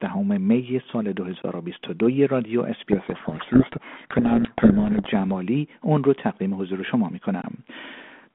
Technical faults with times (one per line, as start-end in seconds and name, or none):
1.42-1.44 underrun with held sample
2.92-5.16 codec payload misread
7.42-7.44 underrun with held sample